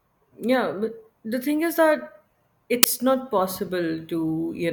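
At 2.83 s the speech is broken by an uninitialised buffer: one 10 ms block was played before any audio was written to it, so stale memory came out as a sharp, loud crack, unlike a dropout, which would leave silence.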